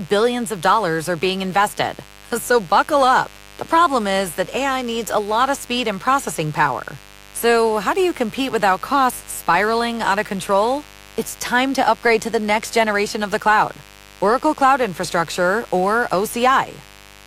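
From start to finish, mains buzz rides under the speech. Sharp switching spikes from the power line, entering through something like a dimmer, a rectifier or an unshielded run, get into the signal path twice in every 50 Hz cycle. That spreads energy across a dense ladder of 50 Hz harmonics reaching well into the kilohertz range. The result is a steady, raspy buzz sitting roughly 25 dB below the speech and never letting up.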